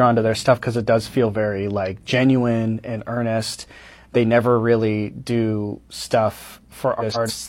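From 7.00 to 7.31 s the speech turns into a brief garbled flutter. This is frames out of order: two neighbouring blocks of about 139 ms, consistent with runs of three frames each, were decoded in swapped order, so the stretch plays with its halves exchanged and no time is lost.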